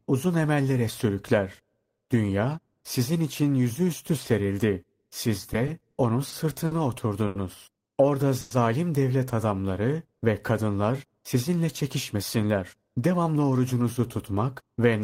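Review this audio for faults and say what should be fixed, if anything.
From 5.53 to 6.73 s the speech suffers repeated stalls (stutter): six brief holds, the longest 50 ms, adding 140 ms in all, about 12% of that stretch. Packets kept arriving late, so the jitter buffer drained repeatedly, unlike a single stall. A deeper adaptive buffer would prevent it.

At 7.27 to 7.37 s there is a short stall from a late packet. One sound is held 80 ms while the receiver waited, then resumes where it stopped, without the fading buzz of a freeze. A slightly larger buffer margin would absorb this.

Between 8.41 and 8.53 s the audio freezes for 100 ms, continuing as a fading buzz or hiss without dropping to silence and then resuming intact. This call audio freeze was likely caused by packets held up in the network. Smoothing network delay would prevent it.

From 11.35 to 13.36 s a jitter buffer speed-up plays speech at 107% speed, trimming roughly 150 ms of pitch periods so the pitch stays the same. 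This sounds hurried rather than chipmunk-like. Gentler buffer shrinking spread over longer stretches would prevent it.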